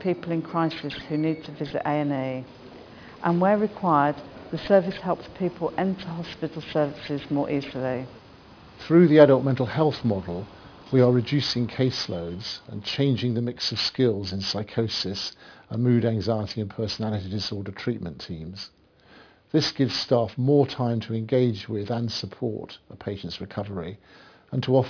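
From start to finish the sound has a gritty, metallic edge, with harsh, unrelated tones sitting in the upper range and the spectrum packed right up to a hard ceiling near 5.5 kHz. This is aliasing: the audio was cut to a much lower sample rate, which points to a drop from 44.1 kHz to around 11 kHz, without first filtering out content above the new half-rate. Everything above 5.5 kHz folded back down as false pitches, audible as a layer roughly 20 dB under the wanted sound.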